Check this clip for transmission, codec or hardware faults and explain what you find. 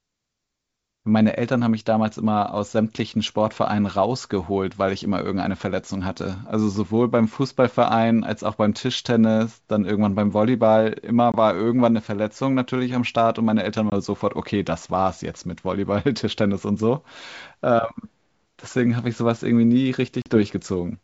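There's one fault here, packet loss on an ADPCM call, and it shows up three times in the speech: 11.32 to 11.35 s, 13.90 to 13.93 s, and 20.22 to 20.37 s. The first two drop about 20 ms each, likely a couple of packets. The last drops about 40 ms, roughly four packets. Each starts as a hard-edged silent gap. When audio resumes, the decoder's predictor and step size no longer match the sender's, so the return comes in with a bit of grit that settles over the next few tens of milliseconds. The wideband G.722 coding underneath stays clean.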